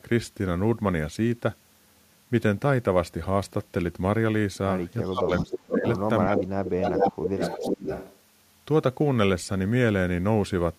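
From 5.08 to 5.85 s and again from 6.24 to 7.88 s, the speech dips by up to about 20 and 25 dB, fading. This is likely speech suppressed in double talk, where the echo canceller turned down the talker along with the far side. Overlapping this, at 5.35 to 5.99 s, 6.36 to 6.44 s and 6.67 to 8.18 s, a copy of the voice returns 411 ms late, only about 5 dB quieter. That is likely echo leak from the speakerphone end.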